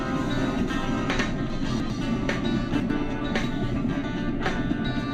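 Two chunks-out-of-order events break up the audio. Between 1.5 and 1.9 s, a 100 ms chunk plays three chunks late, after the material that should follow it. Between 2.7 and 2.9 s, one 100 ms chunk is swapped with its neighbour. Nothing is missing, but each reordering creates three hard joins. Those joins make the passage sound briefly jumbled, which points to chunks being queued or written out of sequence.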